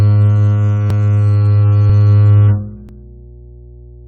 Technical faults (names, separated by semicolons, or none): overlap between stream segments; mains hum